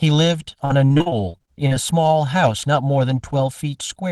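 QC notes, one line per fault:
throughout: channel delay (comb filtering). One channel arrives roughly 1.5 ms late and, summed to mono, cancels against the other at evenly spaced frequencies beginning around 400 Hz, leaving fixed notches that make the speech sound hollow and phasey.
0.65–1.73 s: repeated packet loss (robotic sound). Short holes keep recurring across this stretch, the longest 43 ms, and each is patched by extending the preceding sound. With about 29% of the span filled this way, the speech turns choppy, with pieces missing.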